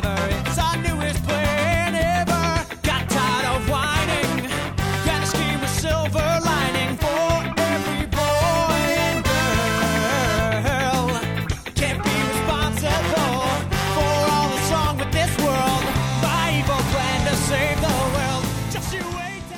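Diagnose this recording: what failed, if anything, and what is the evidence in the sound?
Nothing in the signal chain points to a failure: no stage, from wiring through conversion and buffering to storage and playback, leaves an audible defect here.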